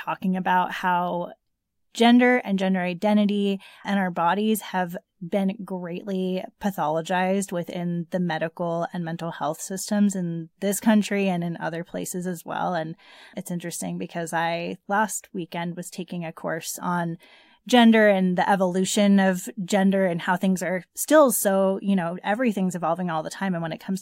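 No technical faults are audible.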